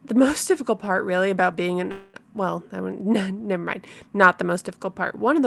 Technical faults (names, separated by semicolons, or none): call audio freeze